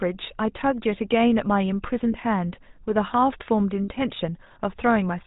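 The whole clip has gone through the GSM full-rate codec, and it's plainly audible from the start. The speech has that buzzy, gravelly edge you get when the coder models the vocal tract and drives it with a coarse pulse train, keeping only a third of the excitation detail. Nothing gets through above 4 kHz, so the top end is dull and the sibilants go soft. All of this fits the 13 kbps full-rate mode.

There are lost GSM frames at two points. At 2.12 to 2.15 s there's a brief metallic ring where the decoder held the last good frame and repeated it. The gap is only about 20 ms, which points to a single dropped frame. At 3.84 to 3.88 s the same rough, ringing hold comes back. It lasts about 40 ms, likely two consecutive frames.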